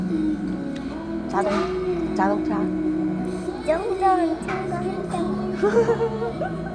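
No technical faults can be heard anywhere in this audio, and the signal holds steady with nothing breaking into it at any point.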